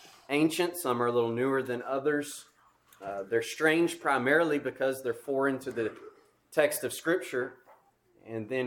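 No technical faults can be heard anywhere in the recording; the signal holds steady throughout.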